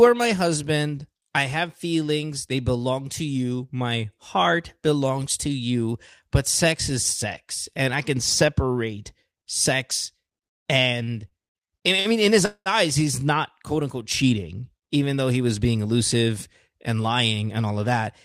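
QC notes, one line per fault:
11.03–11.11 s, 11.28–11.34 s and 12.00–12.08 s, short stall from a late packet: each time a packet arrived late, the jitter buffer emptied and the receiver stretched the last sound by 43, 33 and 52 ms, then resumed just before "I mean in" and "mean in". Nothing is lost, but sounds are briefly held.
12.45–12.69 s, call audio freeze: the sound hangs for about 203 ms, trailing off into roughly 70 ms of silence before resuming from where it stopped. This points to packets likely held up in transit, draining the jitter buffer, with no audio dropped.
16.68–17.85 s, jitter buffer speed-up: after "he was being elusive" the audio runs at 110% speed with unchanged pitch, sounding hurried. The receiver trimmed around 150 ms in total, cutting small pitch-period slices repeatedly to shrink the excess delay held in the jitter buffer.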